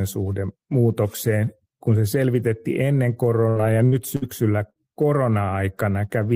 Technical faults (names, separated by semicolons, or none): burst of packet loss